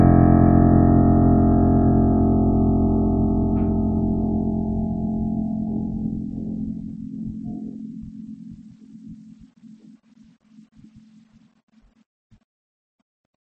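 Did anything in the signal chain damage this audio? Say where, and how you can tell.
Yes. The damage likely comes at the codec stage, from MP3 compression, and it runs through the whole piece of music: nothing sounds above 8.3 kHz, and the texture turns watery and swirly as weak frequency lines flicker on and off between frames, which fits a starved bitrate near 32 kbps. A plain low-pass filter would dull the top without that swirl.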